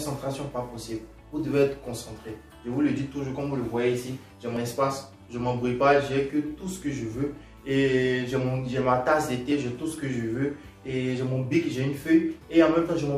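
At 4.57 s and 9.52 s the sound jumps forward, losing around 50 ms each time, with no silence left in its place. This is audio missing between chunks, likely lost at the joins between 5 s recording blocks. The waveform and spectrogram show a sharp vertical seam at each point.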